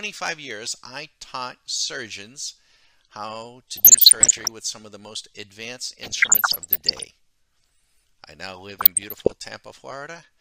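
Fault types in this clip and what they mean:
DAB burbling: short noisy blips in three bursts near 3.75, 6.03 and 8.79 s, as bit errors from weak reception put noise into single MP2 sub-bands.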